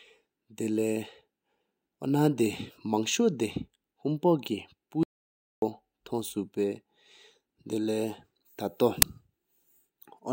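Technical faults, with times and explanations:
5.03 to 5.62 s, audio dropout to silence: the speech stops mid-flow and about 0.59 s becomes silent, with no room tone at all, which sets it apart from a quiet pause. The input was likely lost while recording continued.
9.02 s, uninitialised buffer: a single loud crack lasting about 5.3 ms, which fits a 256-sample block played before audio was written into it. Stale memory was read as samples.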